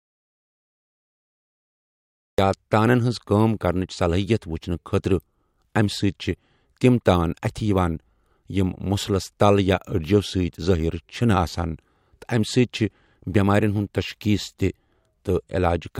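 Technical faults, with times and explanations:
0.00–2.38 s, audio dropout to silence: the speech is already absent as the clip opens, with silence and no room tone, until it resumes at "یا تانَن ہٕنٛز کٲم". The input was likely lost while the recorder kept writing silence, so that stretch is gone.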